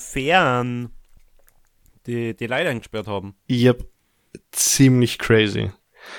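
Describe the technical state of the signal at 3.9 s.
At 3.9 s the signal is intact, with no fault present at that moment.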